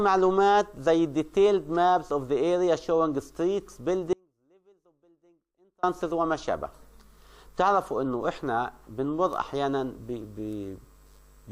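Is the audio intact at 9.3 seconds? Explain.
Yes, the audio is intact at 9.3 seconds, with nothing there that breaks, drops out or distorts the signal.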